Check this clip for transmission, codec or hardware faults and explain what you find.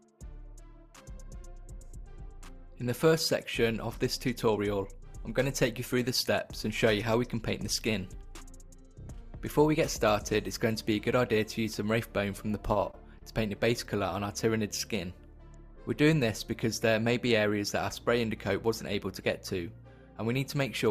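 Three short concealed packet losses occur in quick succession, at 12.73 to 12.77 s, 12.91 to 12.95 s and 13.19 to 13.23 s. In each, 20 ms of audio failed to reach the decoder in time, and the receiver filled the gap by extending the preceding sound, then blended back into the real signal. Each one is heard as a brief smear or wobble. On a spectrogram, harmonics or noise run flat across each gap. The waveform shows repeated cycles or shaped noise.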